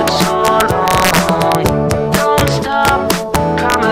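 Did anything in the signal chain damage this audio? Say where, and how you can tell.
Yes, there's integer overflow running right through, most likely at a sample-format conversion or integer gain stage. The loudest peaks, pushed about 5 dB past full scale, wrap to the opposite sign instead of limiting, so a small fraction of samples crack violently, far harsher than clipping.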